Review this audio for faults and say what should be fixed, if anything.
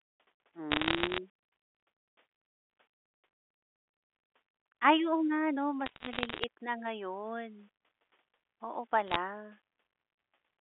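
Throughout the speech there's a grainy distortion that rides along with the level, roughly 40 dB below the signal, and it gets gritty in the quiet parts. That's most likely low bit depth without dither, with samples rounded to something like 9 bits. To prevent it, keep a higher word length through processing and dither before any reduction.

Bursts of sharp ticks and crackle sit over the speech from 0.71 to 1.18 s, 5.86 to 6.44 s and 9.07 to 9.16 s. These are bit errors on a digital phone line. Somewhere under one percent of bits are flipping on the G.711 mu-law link, and each flip corrupts a single sample, so hits on high bits snap out loudly. The telephone band itself sounds as expected. To prevent it, fix the noisy line or transport, or add error detection and concealment.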